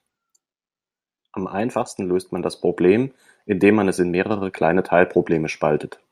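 No technical faults are audible.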